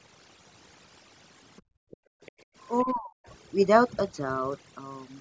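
Overdone noise removal runs through the whole clip. A noise reducer set far too aggressively has cut individual frequency bands whenever they came close to its noise estimate, and the quieter parts of the speech were removed along with the noise. The background between phrases collapses to near silence dotted with twinkling, chirpy specks, and the voice's softer detail is hollowed out.

Other side's voice leaking through appears as four brief fragments of a second, much fainter voice, at 1.56 to 1.62 s, 1.91 to 1.97 s, 2.22 to 2.32 s and 2.78 to 2.83 s. Each lasts roughly 50 to 100 ms and sits around 30 to 35 dB below the main speech. The likely cause is a loudspeaker on the talker's end playing the far side, with an echo canceller that failed to remove all of it from the microphone, so short scraps slip through.

Background gated by the echo canceller appears at 1.62 to 2.21 s and again at 2.37 to 2.55 s. 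While the loudspeaker signal was active, the canceller pulled the microphone down hard, by about 40 dB at its deepest. The room tone dips out for about half a second in the first stretch and about 150 ms in the second. It then snaps back when the canceller releases, which makes the background pump in and out.

Speech suppressed in double talk follows from 2.84 to 3.26 s, just after the last leaked fragment. The talker's own voice drops sharply, by around 40 dB at its deepest, over about 400 ms. This is likely the echo canceller failing to separate near-end speech from the loudspeaker echo while both sides talked at once, and turning both down together. The call's microphone path, with its bass roll-off and nothing above 8 kHz, is normal.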